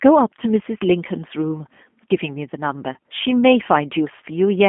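From start to finish the speech has passed through a G.729 codec, and the sound fits the 8 kbit/s G.729A variant. Instead of sending the waveform, the coder sends a vocal tract filter, a pitch predictor and a few pulses per frame, and the decoder rebuilds speech from those. The line band runs from 200 Hz to 3.4 kHz, so the audio is thin and muffled, and the rebuild leaves a plainly audible rough, synthetic texture.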